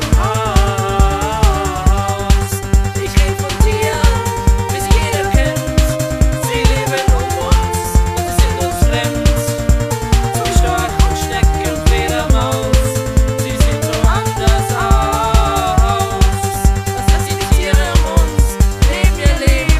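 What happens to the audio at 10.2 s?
Nothing goes wrong at 10.2 s; the audio there plays through intact, with no dropout, click, distortion or other fault.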